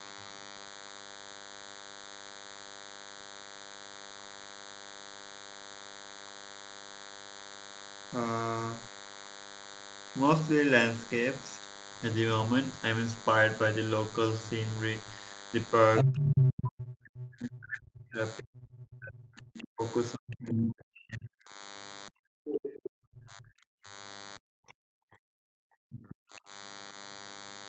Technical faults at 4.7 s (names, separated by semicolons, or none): DECT cordless phone buzz